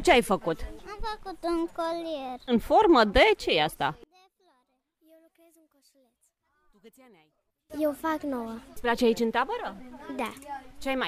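From 4.04 to 7.70 s the summed level drops by about 31 dB, leaving a faint remnant, likely one channel inverted so common content cancels.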